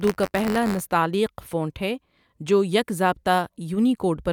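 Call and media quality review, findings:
Buffer tearing, 0.0 to 0.8 s: steady robotic buzz near 94 Hz, present only under speech. Writer and reader slipped on the ring buffer; a small slice of each period replays audio roughly one lap old, with hard joins, which fits a 512-sample buffer.

Bit error spike, 1.0 s: single sharp broadband tick, unrelated to the speech. One flipped bit in one sample; value jumps by a power of two and returns. Probable memory or digital link fault.

Bit error spike, 1.82 s: same single-sample tick, same mechanism. Probable memory or digital link fault.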